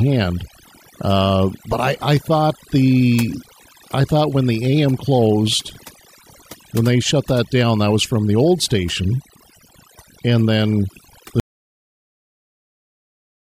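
From the start, the speech carries overdone noise removal: a reduction stage set too aggressively pulls individual frequency bands down whenever they sit near its noise estimate. The background drops and breaks up into twinkling specks, unlike plain low-pass dulling.

At 11.40 s the audio drops out to silence and stays silent through the end, about 2.05 s. The gap is silent with no room tone, unlike a fade or gate, which points to a likely lost input while recording continued.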